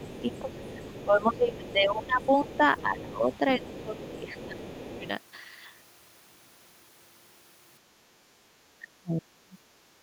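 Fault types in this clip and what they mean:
other side's voice leaking through: A faint second voice sits well below the main talker in short scraps, from the start to about 1.0 s and then in bursts up to about 5.1 s, likely loudspeaker echo that the echo canceller left in the microphone signal.
speech suppressed in double talk: The talker's level sags and thins from about 0.2 to 4.6 s, briefly near 5.0 s, and drops out almost completely around 8.8 to 9.6 s, likely because the echo canceller turned everything down while both sides spoke together.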